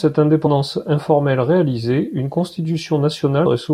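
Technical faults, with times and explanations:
0.46 s and 3.45 s: compressed frames skipped. The speech jumps ahead, by about a tenth of a second at 0.46 s and somewhat more at 3.45 s, as whole encoded frames go unplayed.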